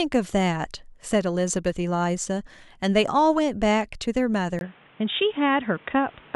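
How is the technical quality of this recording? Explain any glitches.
There's one real glitch, near the end. At 4.59 s, after a brief gap of about 20 ms, the speech goes dull and boxy through to the end, with nothing above 3.8 kHz and new background noise roughly 30 dB down at much the same level. That's likely the input switched to a poorer device.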